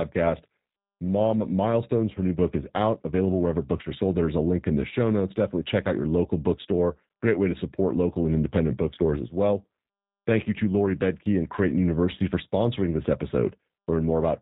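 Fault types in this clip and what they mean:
G.729 codec: The speech sounds band-limited and slightly rough, with a thin, synthetic edge that is plainly audible across the whole clip. That fits coding at 8 kbit/s, where each 10 ms frame is rebuilt from a vocal tract filter, a pitch predictor and a few pulses, and nothing above 4 kHz survives.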